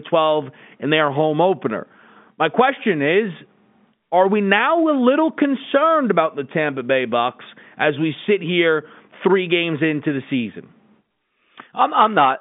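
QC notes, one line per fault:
No faults heard; telephone-band speech, nothing above 3.7 kHz.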